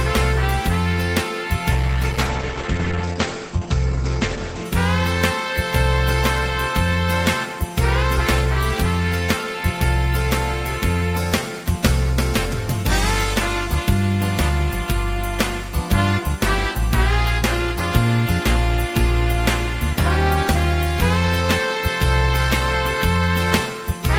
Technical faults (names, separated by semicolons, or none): call bitrate drop